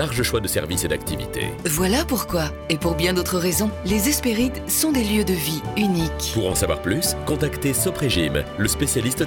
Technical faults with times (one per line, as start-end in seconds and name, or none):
none